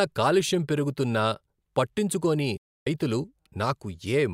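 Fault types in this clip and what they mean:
Digital broadcast dropout: at 2.57 s the speech fades out within 8 ms and stays silent until 2.87 s, as the receiver muted while frames failed to decode.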